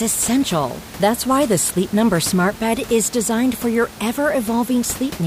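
No technical faults are audible in the speech; the only thing under it is the room's own background noise, sitting about 17 dB down, which belongs to the recording rather than the system.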